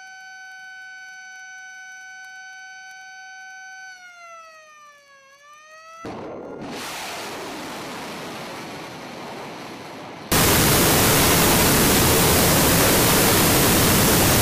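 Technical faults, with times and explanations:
10.32 to 14.41 s, wrong sample width: 16-bit samples read as unsigned 8-bit split each value into separate bytes, giving loud noise with the sound buried beneath, at half speed and an octave lower. The waveform turns dense, and the spectrogram fills with broadband noise.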